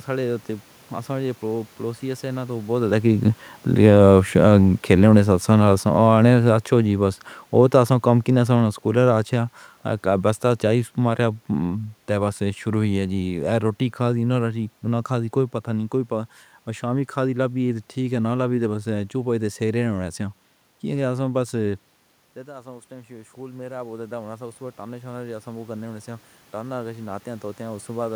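Automatic gain falling runs from 3.70 to 9.38 s, just after the talker seems to come closer to the microphone around two and a half seconds in. The level control judged the louder input as too hot and pulled its gain down gradually, by about 9 dB over those 5.7 seconds. The speech sinks steadily, and the room noise behind it sinks by the same amount, so the quieting is in the gain rather than in the talker.

Automatic gain rising runs from 22.46 to 28.11 s. Around 22 seconds the talker appears to move away, and the input drops by about 16 dB. The gain control then slowly raised its gain by about 11 dB to compensate. The voice and the room noise swell together over more than five seconds. The rise never quite makes up the full drop, so the speech stays somewhat quieter than before.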